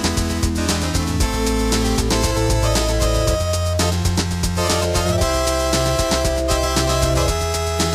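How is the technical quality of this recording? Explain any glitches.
One glitch stands out: a short dropout of compressed frames at 4.25 s. Frames of about 26.1 ms each, a handful of them, were missing or rejected by the decoder, so the sound jumps ahead by roughly 150 ms. The overlapping neighbours blur the join into a soft, smeared blip rather than a click. On a spectrogram it shows as a faint vertical smudge where the texture suddenly shifts.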